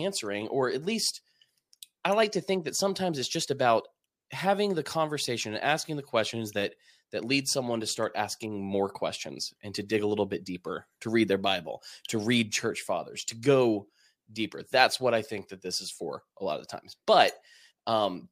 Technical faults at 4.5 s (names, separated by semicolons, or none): none